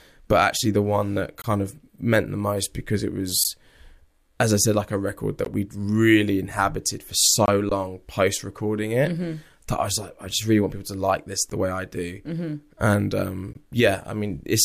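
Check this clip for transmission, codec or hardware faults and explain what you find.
Two faults are present in the speech: repeated gaps between stream segments and one underrun with a held sample.

Gap between stream segments, at 1.42 to 1.44 s, 3.44 s, 5.45 s, 7.46 to 7.48 s, 11.50 s and 13.53 to 13.55 s. The timestamps of consecutive segments don't quite meet, so the player fills the difference with silence. The spacing of about 2 s fits 2-second segments. Each hole lasts about 12 to 22 ms and has hard edges. The speech stops abruptly and then resumes with nothing lost.

Underrun with held sample, at 7.69 s, lasting about 19 ms. The output buffer ran dry shortly after the 7.46 s gap, and the converter held its last sample value until data arrived again. The waveform flattens at a non-zero level, so the speech cuts out with barely a click. Playback then continues from where it stopped with no audio lost, so the restart is soft rather than a sharp click.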